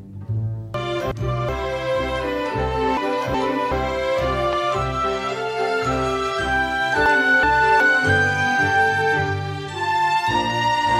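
Chunks out of order at 0.74 to 1.49 s and 2.97 to 3.72 s: a segment of about 372 ms plays one chunk late, so the audio jumbles briefly.

A loud pop at 4.53 s stands roughly 10 dB above the sound, which carries on underneath. It is likely a voltage pulse from a plug, switch or static discharge.

Chunks out of order return at 7.06 to 7.80 s, with the same one-chunk displacement.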